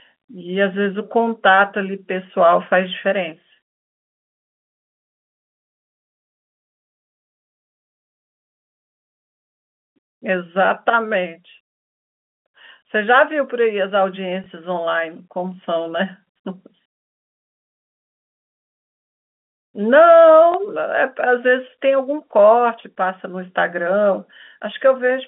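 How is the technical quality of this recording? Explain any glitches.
The speech carries two brief packet-loss glitches on a telephone-band line, audible in the narrow, top-limited sound of G.711 telephone coding. Packet loss with last packet repeated occurs at 14.44–14.46 s and 20.52–20.54 s: a small blip where about 20 ms of sound was replayed, fitting one lost 20 ms packet.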